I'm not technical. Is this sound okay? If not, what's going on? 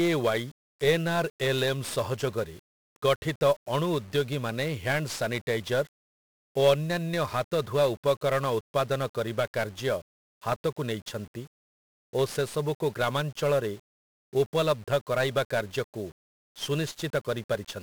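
No. 1-bit DFPWM compression runs throughout the speech: each sample is just one up-or-down step, so everything turns fuzzy and crackly, with the treble buried in hiss.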